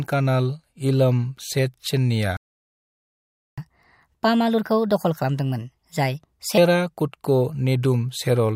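Speech is interrupted by a playback stall: the player likely ran short of data or had its thread blocked. The result is dead silence from 2.37 s to 3.58 s, a gap of about 1.21 s, before the audio picks up again. A catch-up at higher speed follows. The player resamples its backlog to recover some of the lost time, so from 3.58 s to 6.58 s the speech runs at 1.25 times normal speed and its pitch rises by roughly four semitones, then both settle back to normal.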